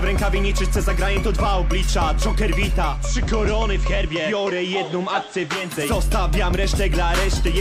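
From 2.85 to 5.73 s, digital radio blends to analogue FM over 254 ms. Level dips about 1 dB, and faint hiss appears.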